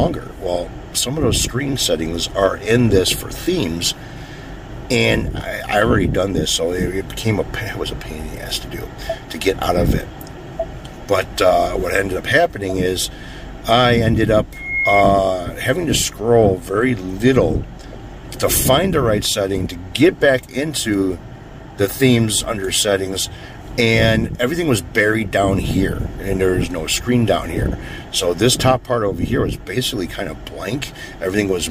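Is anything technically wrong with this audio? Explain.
Yes. From 14.53 to 15.05 s a loudspeaker feedback squeal rises: a piercing single tone near 2.2 kHz that swells over roughly a third of a second to about 5 dB above the surrounding sound. A microphone is re-capturing its own loudspeaker, and at that frequency the loop gain passes unity, so the tone feeds on itself.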